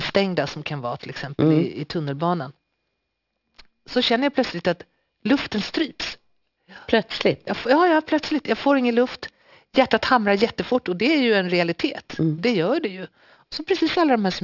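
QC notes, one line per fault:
Throughout: aliasing, speech resampled from 48 kHz to 12 kHz unfiltered, so content above 6 kHz folds back into gritty, metallic sibilants at roughly -15 dB.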